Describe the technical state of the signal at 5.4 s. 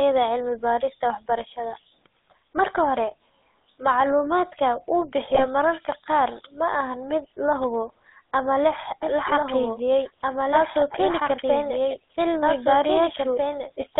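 At 5.4 s the signal is hit by GSM bit errors, running from 5.30 to 5.45 s, between "macluumaadka uu" and "mararka qaar ma aha". Corrupted bits reach the speech decoder, whose filter, pitch and gain values are thrown off for a few frames, which fits an error rate of about 2%. The speech breaks into a brief squawking, gargled burst.

Underneath, the whole signal passes through the GSM full-rate codec, which fits the 13 kbps coder. It rebuilds the voice from a vocal-tract model driven by sparse pulses, within a 250 Hz to 3.7 kHz band. The speech has a plainly audible buzzy, gravelly roughness, and the top end is cut.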